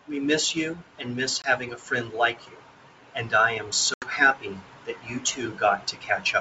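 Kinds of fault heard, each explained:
Packet loss on an ADPCM call: Lost packets were replaced by silence, leaving hard-edged gaps of 20 ms at 1.42 s and 80 ms at 3.94 s. The decoder's predictor and step size lose step, so speech returns slightly distorted, settling within tens of milliseconds.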